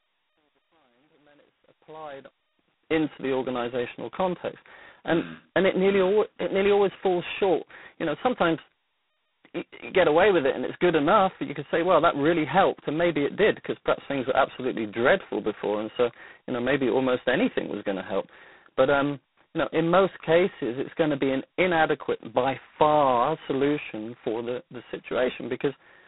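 Throughout the speech, G.726 ADPCM coding adds a harsh, rasping hiss that swells and fades with the speech level. That heavy damage fits the coarse 16 kbit/s mode. A spectrogram shows a 200 Hz to 3.7 kHz band, blank above 3.9 kHz, with grainy noise smeared between the harmonics.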